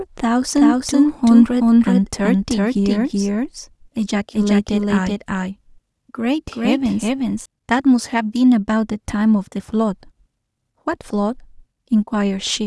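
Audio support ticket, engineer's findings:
Doubled audio track, 0.56 to 7.46 s. Full-band copy of the speech trailing by roughly 400 ms, about as loud as the original. Likely a second, slower capture path mixed in. Unlike echo or reverb: no decay, no room colour, abrupt on and off.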